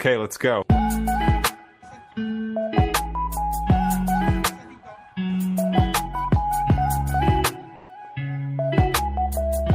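From 7.75 to 7.89 s, about 140 ms of the real background gives way to comfort noise: a steady, featureless hiss roughly 5 dB different in level. The likely cause is discontinuous transmission, consistent with Opus DTX, with the receiver synthesising filler during the pause.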